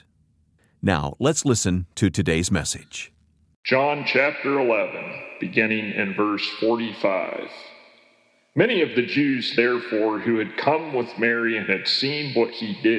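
Nothing is technically wrong with this clip.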